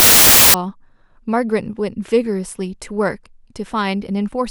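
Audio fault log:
0.00–0.54 s, wrong sample width: loud noise buries the speech, which runs about 1.33 times fast and high. This fits 24-bit samples being read as 32-bit.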